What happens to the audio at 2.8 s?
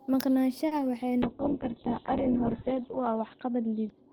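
At 2.8 s the speech is inside a call bitrate drop that starts at 1.23 s and runs to the end. The encoder falls from 32 to 6 kbps and narrows the band from 20 kHz to 4 kHz. The speech sounds muffled, rough and watery.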